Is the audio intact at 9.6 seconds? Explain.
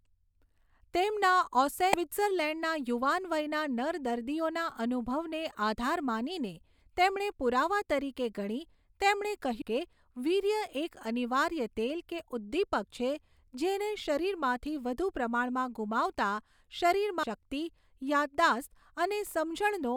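No. At 9.62 s there is a very brief blip caused by damaged data in the compressed stream, just before "કે વીર્ય એક અનિવાર્ય". Part of the encoded speech at that point is corrupt, so the decoder misreads those frames, loses its lock on the frame structure and has to hunt for the next valid frame header before normal decoding resumes. The result is a short glitch cutting into the speech.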